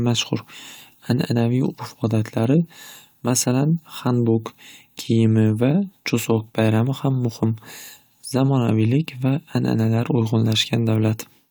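No technical faults can be heard anywhere in this recording.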